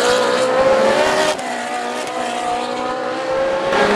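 The audio drops abruptly by about 6 dB at 1.33 s and stays at that lower level until 3.73 s, when it returns to full level just as suddenly. This points to one channel dropping out. The likely cause is the loss of one side of a stereo feed for about 2.4 s. When the two channels are summed to mono, content shared by both falls by half, and anything present only in the missing channel vanishes for that stretch.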